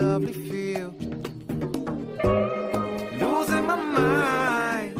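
At 1.08 s the sound switches abruptly to an adaptive stream at a lower bitrate and stays there to the end. Codec artefacts rise, which fits a drop from about 64 to 16 kbit/s Opus. There is no gap in the waveform.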